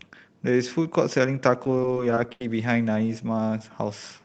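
Repeated packet loss (robotic sound) runs from 1.62 to 2.41 s in this speech clip. Over that stretch the stream drops out about seven times, with the longest hole lasting 78 ms. Each gap is bridged by stretching the preceding sound forward, so roughly a fifth of the passage is rebuilt rather than received. The resulting choppy texture comes from those repeated patches. The call path, audible as a band limit near 8 kHz, points to Opus at around 32 kbps.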